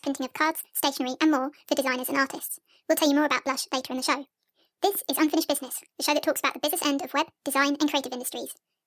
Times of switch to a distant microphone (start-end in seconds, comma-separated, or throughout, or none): none